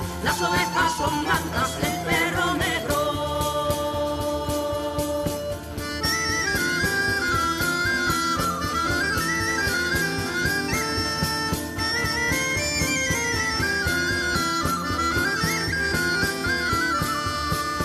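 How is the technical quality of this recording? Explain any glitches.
No technical faults are audible.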